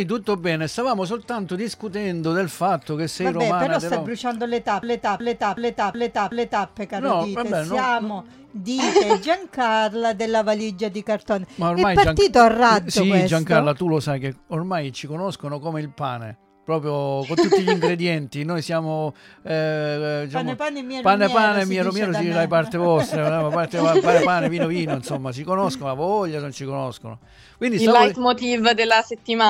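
From 4.83 s to 6.69 s there is a system hang loop. The playback path stalled while the audio hardware kept re-reading the same ring buffer, so one 0.37 s slice of sound repeats exactly five times at about 2.7 Hz. The loop length fits a 16384-sample buffer. Because the segment is fairly long, it comes across as a rhythmic, machine-gun stutter rather than a buzz. When the loop releases, the sound picks up with essentially nothing skipped.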